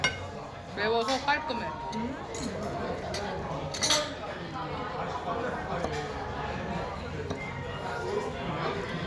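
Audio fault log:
No faults found; the audio runs without any audible defect.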